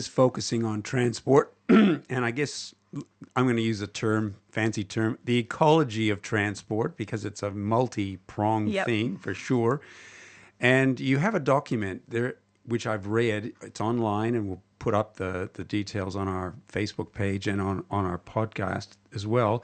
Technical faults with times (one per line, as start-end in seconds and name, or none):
none